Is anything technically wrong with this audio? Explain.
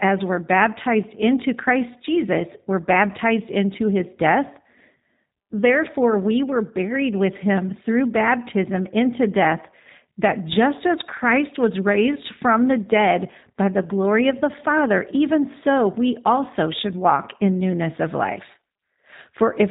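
Yes. The whole clip carries G.729 codec damage, plainly audible. The speech is rebuilt from a vocal tract filter, a pitch predictor and a few pulses per 10 ms frame, which fits an 8 kbit/s G.729A stream. Nothing gets through above 3.8 kHz, and the result sounds rough and synthetic.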